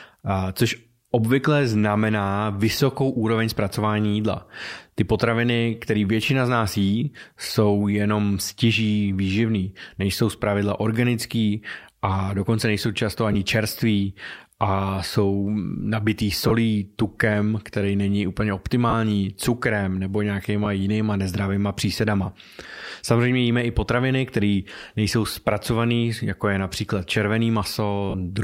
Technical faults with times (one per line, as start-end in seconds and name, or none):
13.33-13.35 lost LE Audio frames
16.48-16.51 lost LE Audio frames
18.90-18.93 lost LE Audio frames
20.65 lost LE Audio frames
28.10-28.14 lost LE Audio frames